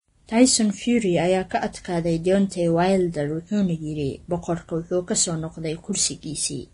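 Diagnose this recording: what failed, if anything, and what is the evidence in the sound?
Codec stage, and it's likely Vorbis compression at a low setting, something around 30 kbps. The speech has nothing above about 10.6 kHz all the way through, and the top end is hissy and grainy, with consonant attacks smeared. The encoder is flattening treble detail into noise over a smooth floor.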